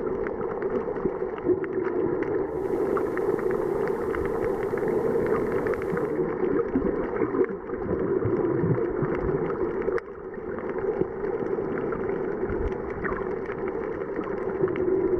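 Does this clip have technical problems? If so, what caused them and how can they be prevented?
Yes. Digital radio blending to analogue occurs from 2.42 to 6.28 s: the receiver lost the digital stream and cross-faded over 310 ms to the station's FM broadcast, bringing in faint hiss well below the signal and a level shift of about 2 dB. Stronger digital reception or disabling analogue blend on the receiver would prevent it.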